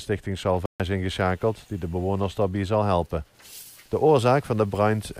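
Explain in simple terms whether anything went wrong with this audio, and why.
At 0.66 s the sound cuts out for about 0.14 s, then resumes at 0.80 s: a playback stall, likely the player briefly running short of data.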